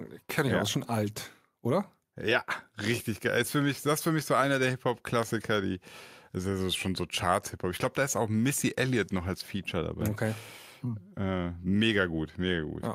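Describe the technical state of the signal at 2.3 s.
At 2.3 s the speech signal is intact, with no dropout, clipping, glitch or other fault audible at that moment.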